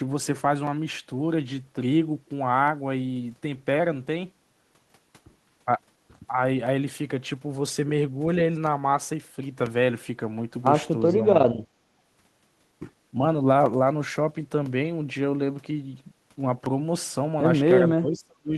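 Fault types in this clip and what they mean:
Speech suppressed in double talk: level is turned down, slightly at 11.1 s and almost fully at 18 s, likely by echo cancellation, not a dropout.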